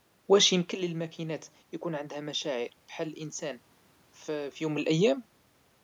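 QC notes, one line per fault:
No system faults heard in this speech recording.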